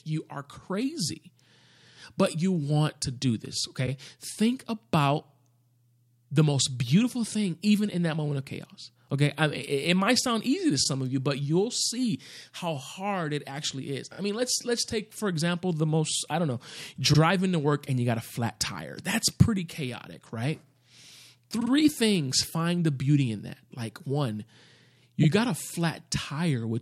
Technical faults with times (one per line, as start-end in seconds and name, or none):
3.85-3.88 repeated frames
10.83-10.86 repeated frames
14.12-14.18 repeated frames
17.12-17.18 repeated frames
21.59-21.70 repeated frames
25.22-25.25 repeated frames